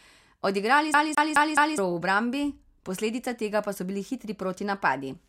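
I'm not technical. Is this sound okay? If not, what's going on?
No. From about 0.94 s to 1.78 s the speech gets stuck. A tiny piece, about 0.21 s long, plays four times in a row, with a brief gap of silence each time it jumps back. This is the fault called CD stuck on one turn. It is the quick, even stutter of a skipping CD. A scratch makes the laser jump back to the same spot on every turn of the disc.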